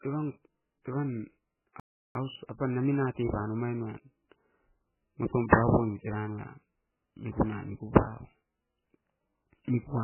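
Speech clip, and it sounds heavily squashed the whole way through: dull and watery, most likely MP3 compression at a very low bitrate, around 8 kbps. At 1.80 s the sound drops out for about 0.35 s and resumes at 2.15 s, likely a playback stall where the player ran short of data.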